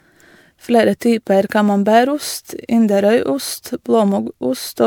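Throughout the speech there is a swirly, hollow smear, and consonant onsets sound soft, pointing to generation loss, likely from repeated MP3 encoding around five times over at a rate that fits 128 kbit/s. Each pass requantised on a shifted frame grid, so the errors piled up. On a spectrogram the upper bands show scattered holes and blotchy, flickering patches, and in the waveform sharp attacks look rounded.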